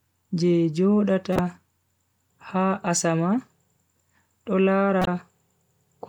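At 1.33 to 1.40 s and again at 5.01 to 5.08 s, the speech is broken by a corrupt frame decoded. Each event lasts about 65 ms, which suggests a couple of damaged compressed frames that the decoder played anyway. The flipped bits misplace gains and spectral codes, so each burst puts energy where none belongs and peaks around -10 dBFS. Both are heard as a short chirp, squeak, blip or burst of noise.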